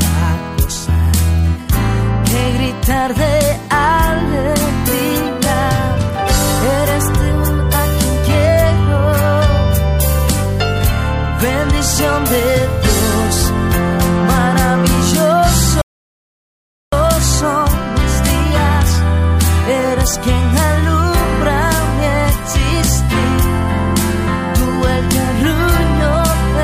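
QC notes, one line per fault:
15.82–16.93 s, rebuffering stall: playback halts into silence for about 1.1 s, then resumes exactly where it left off. The player drained its download buffer and waited for more data, so no audio is lost, but the clip runs longer.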